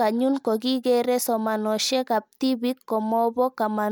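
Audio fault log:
Nothing stood out on listening to the speech in this recording.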